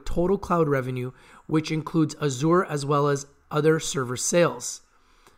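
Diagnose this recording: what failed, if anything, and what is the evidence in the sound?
Nothing in the signal chain failed: the audio stays continuous, with no breaks, dropouts or distortion from any stage of capture, conversion, transport or playback.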